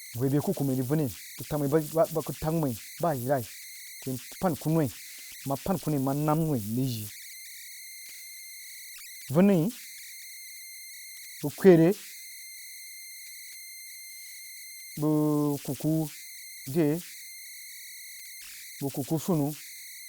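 An undithered delta-sigma converter settles into repeating bit patterns, producing converter idle tones: a whistle around 2 kHz, about 18 dB below the speech, throughout.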